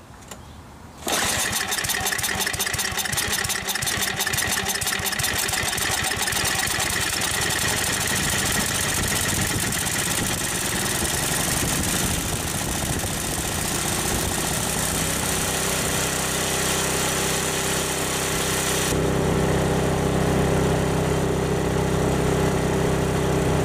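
De-emphasis applied wrongly affects the audio from 18.92 s through to the end. In that stretch the treble falls away along a smooth downward slope, reaching about 11 dB below the 1 kHz level by 10 kHz. The result sounds dull and muffled. A treble cut intended to reverse pre-emphasis has been applied to material that carried no such boost, or applied a second time, removing high-frequency content that should have stayed.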